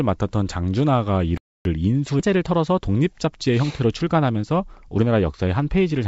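At 1.37 s the speech cuts out and stays silent until 1.65 s, a playback stall of about 280 ms, likely from the player running short of data before resuming. At 2.20 s a skip ahead drops roughly a second of audio with no gap, so speech on either side is spliced almost directly together. From 2.29 s to 4.99 s a jitter buffer speed-up trims short pitch-period pieces, running about 8% fast at unchanged pitch and removing roughly 200 ms, which makes delivery sound hurried. Throughout, the call path's wideband coding leaves nothing above 8 kHz.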